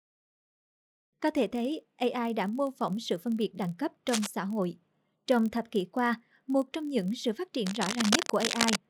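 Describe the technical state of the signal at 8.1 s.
At 8.1 s the speech carries two faults at once. Cable scratch noise runs from 7.66 s to 8.80 s: dense, irregular bursts of crackle and rustle, roughly as loud as the speech itself. The likely cause is a worn cable, connector or control being moved so that its contact resistance flickers rapidly. Unlike digital clicks or dropouts, the bursts are uneven in spacing and texture, sounding like physical scraping rather than clean, isolated ticks.

Underneath, the filter restarted on every block is present throughout: a filter loses its state at each block boundary and starts again from silence, leaving a small transient each time. The result is a steady buzz at about 43.1 Hz, which fits a 1024-sample buffer, and it rises and falls with the speech level. Its strict periodicity separates it from the scratch noise's random bursts and from mains hum, which would stay constant regardless of signal level.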